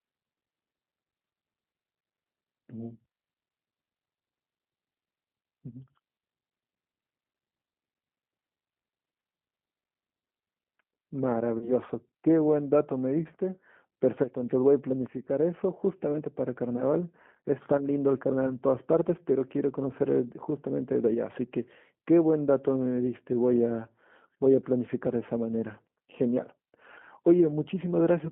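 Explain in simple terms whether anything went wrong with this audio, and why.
Yes. The G.729 codec, used throughout, squeezes the speech into a narrow telephone band of roughly 150 Hz to 3.4 kHz. It rebuilds each short slice from a simple voice model, so the speech sounds plainly rough, thin and slightly synthetic.

VoIP packet loss concealed by the speech codec happens at 11.58 to 11.73 s and again at 18.47 to 18.51 s. Chunks of sound went missing, about 30 ms in the first gap and 10 ms in the second. The decoder stretched the last sound into a fading buzz or hiss, and the speech takes a moment to recover.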